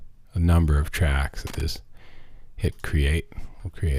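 An irregular burst of crackle and scratching cuts into the sound from 1.47 s to 1.61 s, lasting about 0.14 s, with the signal stuttering on and off. This is loose connector crackle: a worn or dirty contact somewhere in the cable path shifted and rapidly made and broke the connection. Each break chopped the audio, and any DC present on the line turned those interruptions into clicks and pops.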